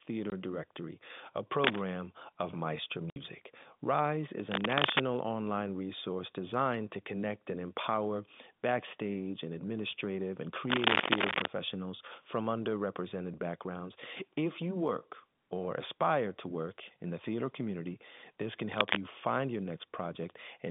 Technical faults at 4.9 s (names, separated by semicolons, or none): cable scratch noise